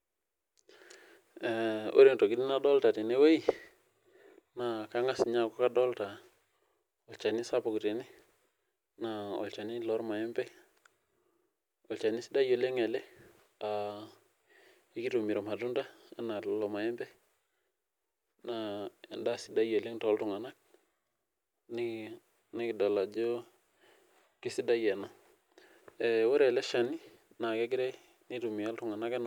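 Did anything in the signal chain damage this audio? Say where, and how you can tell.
No, nothing in the signal chain has left an audible mark on this speech recording, which holds steady in level, timing and tonal balance throughout.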